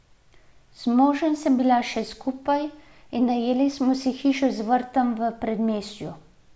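A short speech recording with no technical fault to be heard anywhere in it. Nothing calls for a time stamp or a cause.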